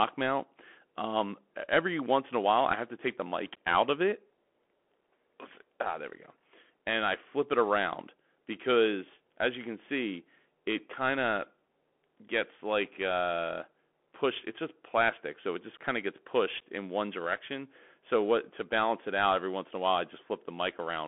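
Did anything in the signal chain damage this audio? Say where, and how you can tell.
Yes. The codec stage damaged it for the whole clip, through a Bluetooth CVSD headset codec. A spectrogram shows speech held to roughly 200 Hz to 3.4 kHz, empty above 3.8 kHz, over a granular noise floor. Its one-bit, step-adapting coding audibly roughens s sounds and loud peaks.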